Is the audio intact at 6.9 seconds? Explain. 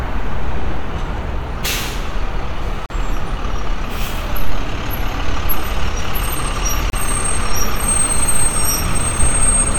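No. A gap at a join of encoded pieces runs from 6.90 to 6.93 s: separately encoded segments were butted together untrimmed, leaving encoder delay and frame padding as a 32 ms silence with smeared edges. Unlike a dropout, the sound resumes exactly where it stopped.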